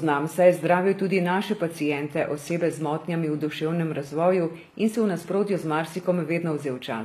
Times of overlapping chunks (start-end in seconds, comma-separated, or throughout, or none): none